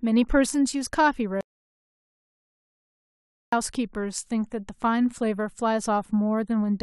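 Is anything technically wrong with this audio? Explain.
Yes. From 1.41 s to 3.52 s there is an audio dropout to silence. The speech cuts off abruptly mid-flow and returns just as suddenly, with about 2.1 s lost, likely because the input disconnected while recording continued. Unlike gating, no room tone remains.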